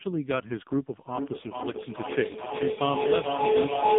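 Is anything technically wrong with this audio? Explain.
Yes, there are two faults in this speech recording.

The AMR narrowband mobile codec damage runs through the whole clip. This codec samples at 8 kHz and rebuilds the voice from a vocal-tract model excited by sparse pulses. Here the band is confined to roughly 150 Hz to 3.6 kHz, with nothing above 3.8 kHz. The damage is heavy, with a buzzy, synthetic voice quality that points to a low rate, around 5.15 kbps.

A feedback howl starts at 1.1 s and continues to the end. Two devices in the same room on one call form a loop from microphone to loudspeaker that gains level on each pass. The repeats therefore build instead of dying away, and they narrow onto a tone around 400 Hz. The loop repeats roughly every 0.4 s, and the howl peaks about 5 dB above the speech.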